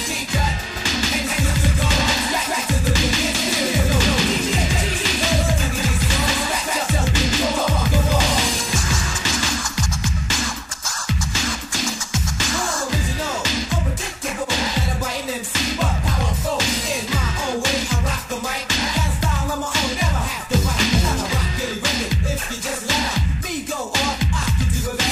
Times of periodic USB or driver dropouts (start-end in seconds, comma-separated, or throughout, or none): none